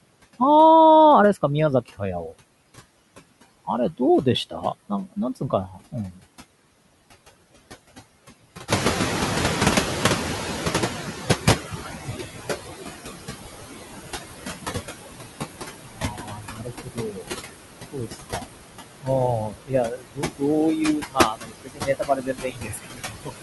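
Noise suppressor artifacts run through the whole of this speech recording. The suppressor pulls the steady background down by about 17 dB, but it does so band by band and frame by frame, so the residue breathes: it sinks in the gaps and swells back under the speech. The room noise itself belongs to the recording, and it jumps by about 14 dB at roughly 8.5 s, ending up only about 7 dB below the speech. That jump causes the noise suppressor catching up from 8.68 to 12.32 s. The suppressor's noise estimate lags behind the new level, so the louder background leaks through with less reduction at first and only settles to a cut of about 16 dB after some 3.6 s of adaptation. Speech cut by the noise suppressor happens at 4.5–6.2 s, 11.46–12.27 s, 15.83–17.37 s, 17.92–18.5 s, 19.01–20.44 s and 20.98 s to the end. In each, the suppressor mistakes parts of the speech for noise and turns them down with the background by about 13 to 22 dB. 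The earlier two lose only brief fragments, while the later stretches lose between half a second and two seconds of syllables and endings, which sound swallowed or faint.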